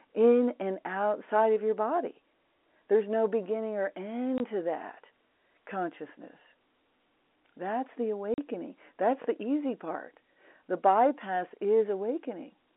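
Packet loss filled with silence cuts a 20 ms hole at 4.38–4.40 s and a 40 ms hole at 8.34–8.38 s, consistent with 20 ms packets, with hard edges.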